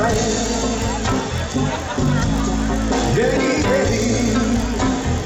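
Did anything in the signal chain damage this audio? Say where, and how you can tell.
Yes. A faint buzz at 50 Hz rides on the sound for the whole clip and is present only while there is signal, with no separate clicks. It comes from the sample-rate conversion stage: a resampler restarted on every block. Each 20 ms block was converted on its own, so the filter lacked true neighbouring samples at every edge and left a small error 50 times a second. The behaviour fits a 16 kHz to 48 kHz upsampler.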